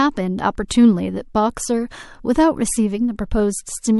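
A speech clip with one pre-echo at 0.68 to 0.71 s: a roughly 24 ms smear of hiss, about 15 dB up, sits just ahead of a sharp attack. The codec seems to have kept long blocks, around 36 ms, without switching to short ones.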